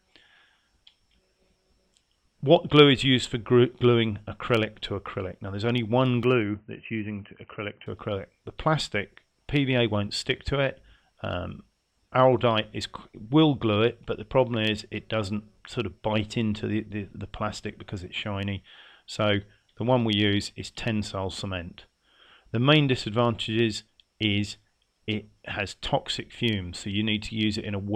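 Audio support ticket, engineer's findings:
Input likely switched to a poorer device, 6.23 to 7.86 s. Capture path narrows: nothing above 3 kHz, so sound turns dull and boxy. Level drops a few dB, new faint background noise appears. No gap at switch; full band returns at 7.86 s.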